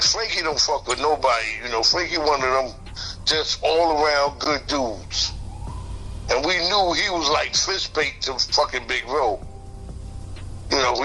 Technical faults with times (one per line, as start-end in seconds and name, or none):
0.00-11.04 MP3 compression
0.86-0.93 corrupt frame decoded
4.42-4.47 corrupt frame decoded